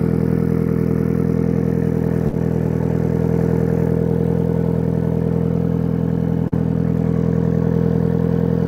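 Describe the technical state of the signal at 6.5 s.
At 6.48–6.54 s, short concealed packet loss: about 40 ms went missing and was filled by extending the preceding sound, leaving a brief smear with smoothed, repeated spectrogram texture.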